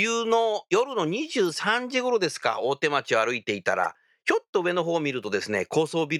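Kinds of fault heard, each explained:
Corrupt frame decoded: flipped bits in a couple of compressed frames were played anyway, so misread gains and codes put energy at wrong frequencies, heard in this speech as a short chirp, squeak, blip or burst of noise peaking around -15 dBFS from 3.84 to 3.86 s.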